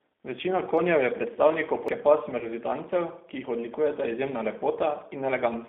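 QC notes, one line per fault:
Throughout: G.729 codec. The sound is confined to a telephone band of about 200 Hz to 3.6 kHz, with nothing above. At 8 kbit/s the coder rebuilds speech from a filter, pitch predictor and a few pulses, so it sounds plainly rough and synthetic.
1.88 s: CD skip. A very brief mute is heard, a few milliseconds long. The laser jumped to another turn of the spiral, so playback picks up from a different place rather than continuing smoothly.
2.39 to 2.49 s: VoIP packet loss concealed by the speech codec. About 20 ms of audio is missing, which fits a single lost packet. The decoder extends the last pitch and filter at falling gain, giving a fading fill. Recovery continues to 2.49 s.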